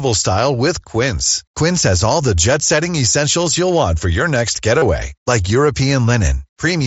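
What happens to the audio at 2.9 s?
Nothing goes wrong at 2.9 s: the speech continues intact through that moment, with no dropout, click or other fault.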